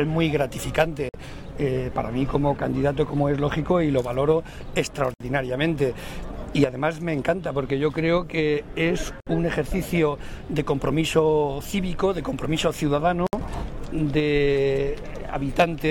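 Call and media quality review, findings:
Gap at a join of encoded pieces: dropouts at 1.09–1.14 s (50 ms), then 5.14–5.20, 9.20–9.27, 13.27–13.33 s (64 ms each), repeating every 4 s. Untrimmed encoder delay and final-frame padding between separately encoded segments. Waveform shows flat near-silent strips; spectrogram shows full-band vertical blank bands with slightly smeared edges.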